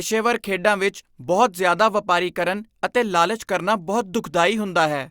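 No technical faults can be heard anywhere in the recording.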